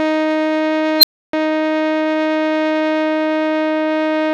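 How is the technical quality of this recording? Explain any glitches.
The music has one clear glitch, an unstable filter. From 0.99 s to 1.33 s a squeal around 4 kHz swells over about 40 ms, clips hard, then drops to roughly 0.3 s of silence. A recursive filter fed bad coefficients kept amplifying its own output until the values overflowed and it reset.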